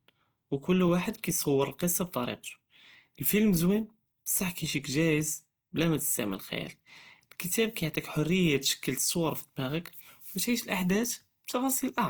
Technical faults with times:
0.00-12.09 Opus compression

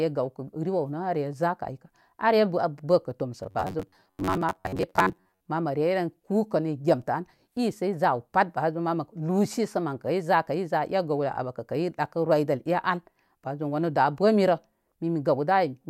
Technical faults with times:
3.43-5.45 robotic sound from repeated short buffers

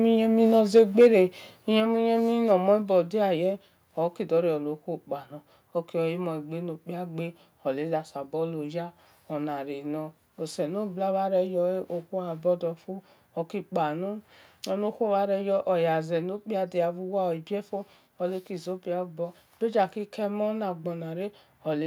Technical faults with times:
0.75-1.07 microphone overload
0.79 microphone volume stepped down

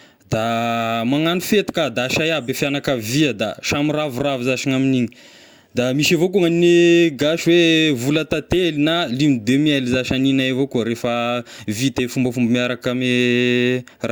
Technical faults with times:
none

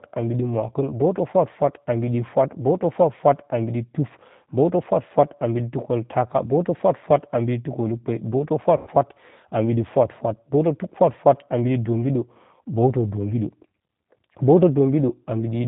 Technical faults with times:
0.00-15.67 G.729 codec
8.77-8.90 VoIP packet loss concealed by the speech codec

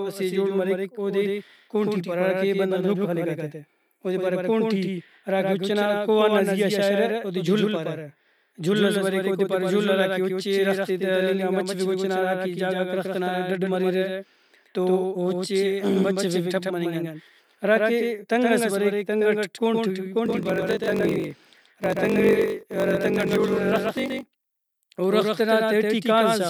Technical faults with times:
0.00-26.49 doubled audio track
20.24-24.75 block size mismatch (padded)

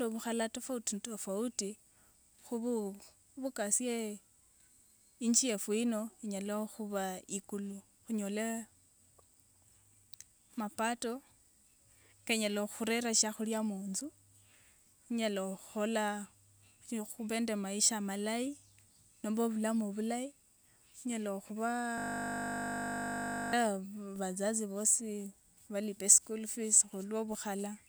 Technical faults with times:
21.98-23.53 system hang loop

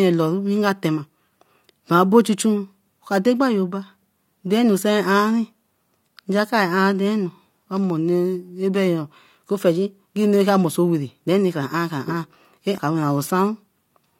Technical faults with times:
12.78 CD skip

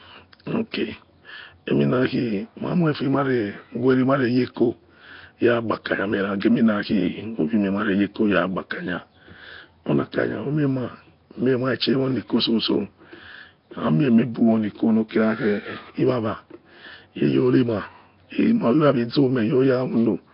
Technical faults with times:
0.00-20.34 Nellymoser compression
6.40-6.42 pre-echo

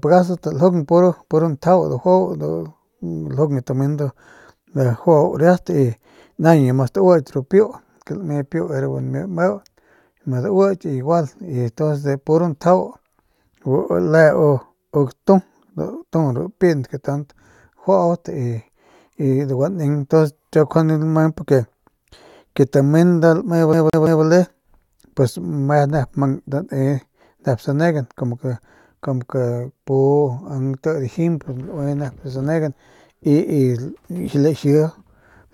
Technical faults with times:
23.73-24.23 CD stuck on one turn

